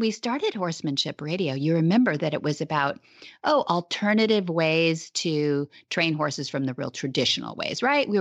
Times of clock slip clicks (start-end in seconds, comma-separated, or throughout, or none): 0.28-7.94